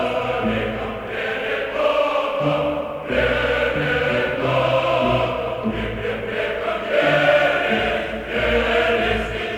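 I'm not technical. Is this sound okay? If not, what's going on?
No. Throughout the clip there's sample clock jitter: the clock that sets the timing of each sample wobbles by around a microsecond or two, so the sound is captured slightly off time. This adds a faint hiss or grit that rises when the sound gets loud or bright and disappears in quiet moments. That's how it differs from ordinary background hiss, which stays the same level whatever the sound is doing.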